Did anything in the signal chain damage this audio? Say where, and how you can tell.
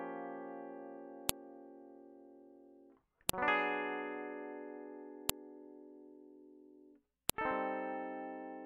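Yes. At the storage or playback stage, the music was joined from separate WAV pieces without stripping their headers, so each header plays as audio: a file header played as audio. Sharp clicks land at 1.29, 3.29, 5.30 and 7.30 s, every 2 s, regardless of the music.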